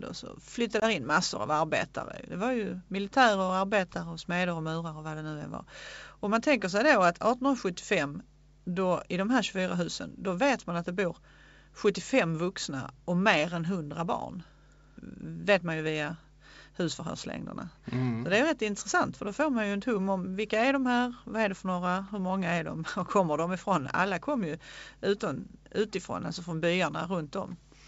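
At 0.80 s, packet loss on an ADPCM call leaves a hard-edged 20 ms silence, roughly one packet; the decoder's predictor then resynchronises, settling by 0.84 s.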